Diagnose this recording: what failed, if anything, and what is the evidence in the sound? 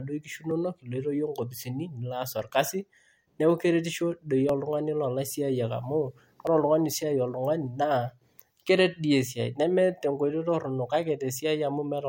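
Regular ticks in the speech every 2 s, from 0.51 to 6.47 s, each skipping a few milliseconds: periodic USB or driver dropouts, where the driver or buffer stage is stalled by a recurring background task.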